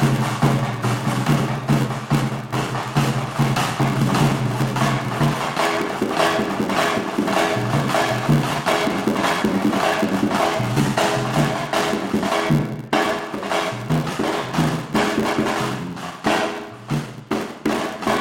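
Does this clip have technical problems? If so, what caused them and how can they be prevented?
Yes. A block size mismatch (padded) runs throughout: each block the next stage reads, which fits a 512-sample block, is only partly filled and the rest is zero-padded, leaving a gap every block. This causes an 86.1 Hz buzz and playback at 0.861 times normal speed. Unlike a sample-rate error, the pitch stays about normal. To prevent it, have every stage use the same block size, or buffer the output so each block is completely filled before it is read.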